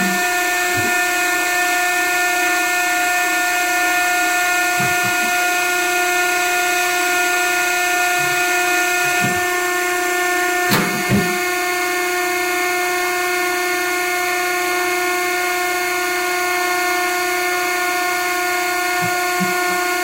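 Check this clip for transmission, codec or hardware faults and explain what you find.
One fault runs the whole way through: low bit depth without dither. The sound is grainy from start to finish, with a harsh texture that shifts as the sound changes. That's most likely the signal squeezed down to around 4 bits and rounded with no dither. The rounding error tracks the signal, sitting only about 15 dB below the sound itself.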